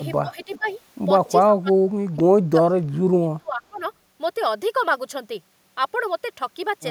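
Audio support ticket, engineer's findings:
Speech suppressed in double talk, 0.22–0.66, 1.39–2.86, 3.19–3.82 s: dips of about 15, 35 and 25 dB. Pinched waveform envelope, thinned upper bands on spectrogram. Likely echo canceller attenuating during overlap.

Echo leak, 0.39–0.73 s: faint copy delayed 389 ms, about 25 dB down. Shows as a weak, shifted repeat of earlier harmonics on the spectrogram. Likely residual from the far-end canceller.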